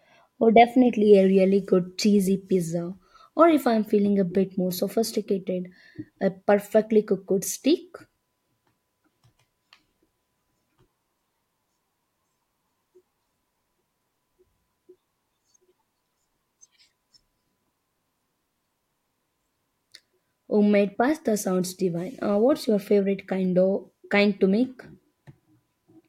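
No technical faults are audible.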